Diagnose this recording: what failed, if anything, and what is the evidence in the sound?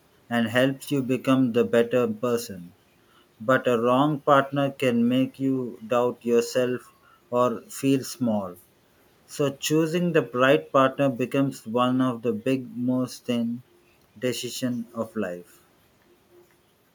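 Nothing failed in this recording, and there is no evidence in the sound of a fault at any stage.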